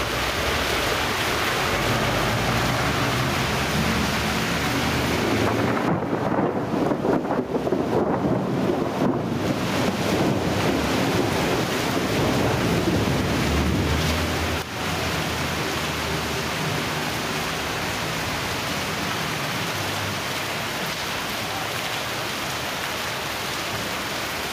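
Gain pumping runs through the whole recording. The level ducks by something like 15 dB under each loud sound before creeping back. This likely comes from the input gain being set far too high, with a fast limiter or compressor clamping down on every peak. Unlike a noise gate, which would chop the gaps to silence, loud and soft events here sit squashed close together.

At 14.62 s there is a bit error spike: a single sample jumps off its value and returns at once, heard as one sharp, bright tick. It differs from a dropout or buffer glitch because nothing goes missing and the sound around it continues unbroken. It also differs from a clipping crackle because it doesn't follow the loudness of the material. The tick is broadband and bears no relation to what is playing.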